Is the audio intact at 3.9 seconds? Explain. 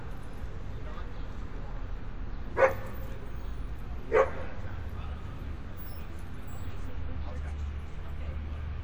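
Yes, the audio is intact at 3.9 seconds, with no dropout, click, distortion or other fault at that point.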